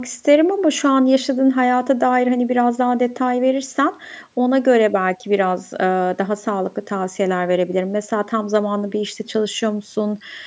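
There are no technical faults to describe in this speech; the only processing heard is the call microphone chain, which trims the lowest bass and leaves nothing above 8 kHz, as that path normally does.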